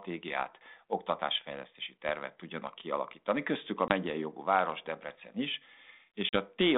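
At 3.88 s, just before "jogú város", and at 6.29 s, packet loss on an ADPCM call cuts hard-edged silent holes of about 20 and 40 ms. Unlike a plain dropout, the sound returns slightly distorted while the decoder's predictor resynchronises.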